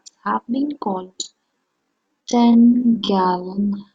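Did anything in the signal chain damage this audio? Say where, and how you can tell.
Yes. A time-stretching stage, likely in editing or playback software, slowed everything from 1.0 s to the end to 0.55 times its original pace by repeating short fragments. Right after "have been" the delivery drags abruptly, pitch unchanged.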